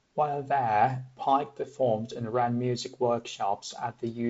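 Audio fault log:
No faults heard in this speech clip.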